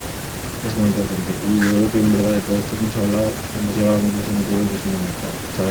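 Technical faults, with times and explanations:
No technical faults detected.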